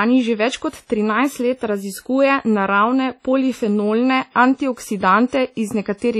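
Speech carrying heavy WMA compression damage from start to finish: consonants ring and smear, the background turns washy, and a hiss swells and fades with the voice, which fits a bitrate around 32 kbps. Long transform blocks spreading quantisation noise are the likely cause, unlike denoiser warbling.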